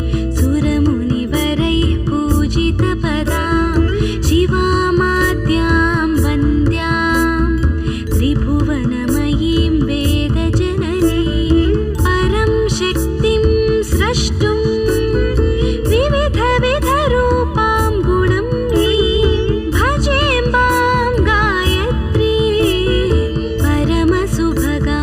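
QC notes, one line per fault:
Throughout, channel delay (comb filtering): one channel arrives under a millisecond late, and the mono sum cancels common content at evenly spaced frequencies, first near 700 Hz and then roughly every 1.4 kHz, so the sound comes across hollow and phasey.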